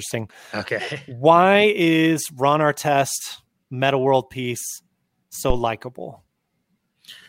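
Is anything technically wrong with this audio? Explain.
Yes. At 5.50 to 5.64 s the speech is interrupted by a phantom power thump, a deep low-frequency bump peaking at about -6 dBFS and dying away in roughly 30 ms. It comes from a supply being switched on or off on the live input: the sudden voltage step passes through the coupling capacitors as one large swing. On the waveform it shows as a single tall offset pulse with a quick tail, and on a spectrogram as a brief dark band concentrated at the very bottom.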